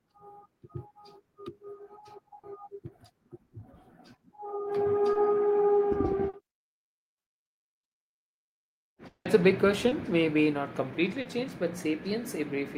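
Short concealed packet loss occurs at 2.39–2.45 s, 5.13–5.17 s and 6.29–6.35 s. Each time, 20 to 40 ms of audio arrived too late. The decoder filled the gap by extending the preceding sound, which leaves a brief smear or wobble before the real signal resumes.

A long network dropout follows at 9.07–9.27 s. The sound stretches into a fading buzz or hiss over roughly 180 ms, the last 90 ms or so of which falls to near silence. The likely cause is a burst of packets that never arrived, so that portion is simply gone.

The same short concealed packet loss returns at 9.89–9.93 s and 11.21–11.27 s, patched over 20 and 40 ms respectively with the same brief smear.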